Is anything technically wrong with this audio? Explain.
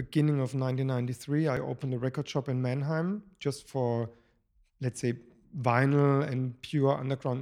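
Yes. At 1.57 s, just before "opened a record shop", there is a jump where the speech skips forward without any gap. This is likely a dropped buffer (overrun): the recording program did not collect a block of samples before the hardware overwrote it, so roughly 10 ms of audio vanished and the two sides were joined directly. Unlike a dropout, no silence is inserted. The sound skips ahead, giving a discontinuity.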